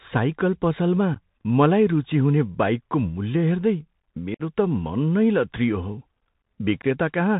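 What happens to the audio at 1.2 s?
Just after "साइकल पसलमा", from 1.14 to 1.16 s, there is unconcealed Bluetooth headset packet loss. A couple of voice packets between headset and phone were lost, leaving a gap of about 15 ms. It is filled with silence or an idle pattern. The result is an abrupt hole before "मलाई रुचि हुने बाइकको", and the speech resumes briefly quieter.

Underneath, the Bluetooth CVSD headset codec is plainly audible, which fits a 64 kbps link. It encodes one up-or-down bit per sample with an adapting step. It cuts everything above 4 kHz, makes s sounds scratchy, and leaves a granular hiss.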